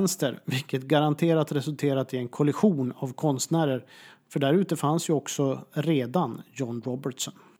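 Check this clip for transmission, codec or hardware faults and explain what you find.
No faults turn up in this speech clip. Nothing heard here points to trouble anywhere along the signal chain.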